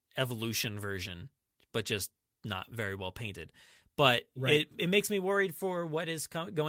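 Speech recording with no technical faults to report.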